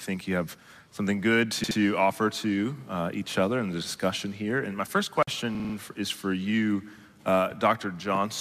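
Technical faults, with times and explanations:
1.63–1.78 s: repeated frames. A 72 ms block plays twice more, giving a stutter. This adds 144 ms instead of removing sound, as a dropout would.
5.55–5.74 s: repeated frames. A 48 ms block plays four extra times, giving a faster stutter that adds 192 ms. Both block lengths fit 24 ms codec frames.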